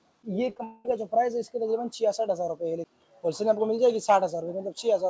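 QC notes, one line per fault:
0.50, 0.55 and 0.58–0.60 s, short concealed packet loss: three tiny gaps in quick succession, each about 10 ms of audio that didn't arrive in time. The receiver patched each one by extending whatever it had just played and then blending back into the real signal. You hear a quick smear or wobble at each spot rather than a clean hole.
0.64–0.86 s, long network dropout: this is likely a network stall, since roughly 210 ms of audio never showed up. The concealment carried the last sound forward the whole way, so there's no true silence. Instead there's a stretched, buzzy or hissy continuation that fades as it goes, and then the real audio comes back later on with that stretch missing. The call codec's top end stops around 8 kHz.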